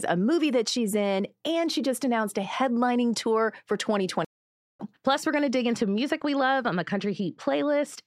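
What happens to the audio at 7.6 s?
At 7.6 s the speech sounds dull and muffled, part of a stretch running from just after "we're going to dig" at 5.78 s to the end. This is de-emphasis applied wrongly: a treble cut meant to undo pre-emphasis rolls off the highs, about 8 dB down at 10 kHz relative to 1 kHz.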